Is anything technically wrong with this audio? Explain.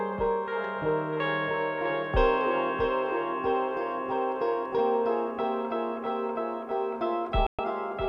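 Yes. Near the end of the music, from 7.47 to 7.59 s, the sound drops to silence for about 120 ms: a digital broadcast dropout, where the receiver muted over corrupted frames, consistent with a few lost frames.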